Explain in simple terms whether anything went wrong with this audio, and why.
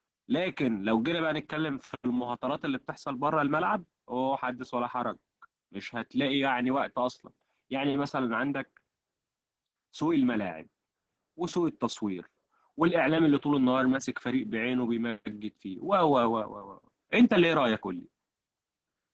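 The speech was squeezed hard by Opus voice compression throughout, from start to finish, using its speech-modelling mode, which keeps only a rough outline of the voice and drops the highest sounds. As a result, the voice comes across as muffled, hoarse and slightly robotic.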